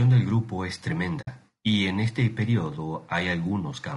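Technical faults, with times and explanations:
Throughout: low-delay AAC compression. The speech is plainly rough and grainy, with noise filling the gaps between pitch harmonics and a thin, synthetic-sounding top band. This is likely AAC-ELD at a low rate, which fits roughly 32 kbps, where short frames resolve harmonics poorly.
1.21 to 1.28 s: AAC frame loss with muting. The sound drops into a soft-edged silence, fading out and back in rather than cutting abruptly. The gap fits about 60 ms of lost frames whose spectrum the decoder zeroed, with overlapping windows smoothing the edges.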